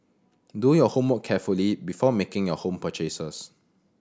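No technical faults can be heard anywhere in the speech recording; the signal stays continuous and steady throughout.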